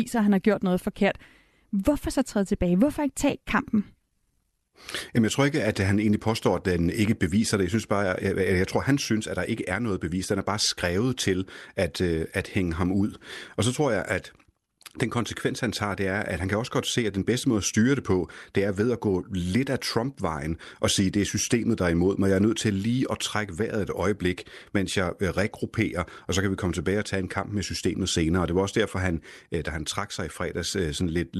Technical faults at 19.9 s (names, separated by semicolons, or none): none